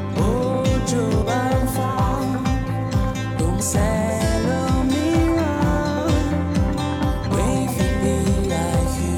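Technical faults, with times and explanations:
1.21 s, 3.60 s and 7.25 s: damaged data in a compressed stream. Each is a brief glitch lasting under 20 ms. Corrupted bytes in the compressed stream make the decoder misread those frames. It loses sync and searches for the next valid frame header, which causes the short burst.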